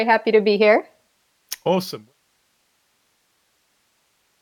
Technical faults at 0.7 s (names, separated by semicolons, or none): none